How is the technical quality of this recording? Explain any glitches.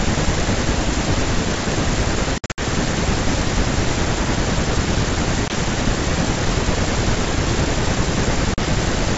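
The recording has three dropouts from packet loss on an ADPCM call. From 2.38 to 2.60 s, about 160 ms vanishes in scattered hard-edged gaps, the longest 60 ms, which points to several lost packets. A single 20 ms hole follows at 5.48 s, and a 40 ms one at 8.54 s. Silence fills each gap. The decoder's predictor and step size then disagree with the sender's. So the speech returns slightly distorted, settling within tens of milliseconds.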